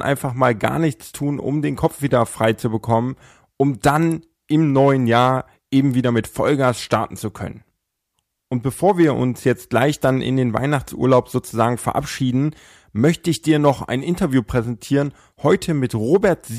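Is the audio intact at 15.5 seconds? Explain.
Yes, at 15.5 seconds the speech plays through intact, with no dropout, glitch or other fault to be heard at that moment.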